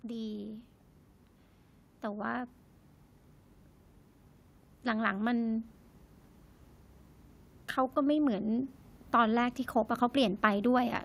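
A speech recording, and the thing to listen for comes near the end: automatic gain rising from about 7.94 s to 9.61 s. Over those roughly 1.7 seconds the level creeps up by about 3 dB, and it's not just the talker getting louder. The room and background noise swell right along with it. That's the AGC deciding the input had gone too quiet and slowly winding its gain up to compensate.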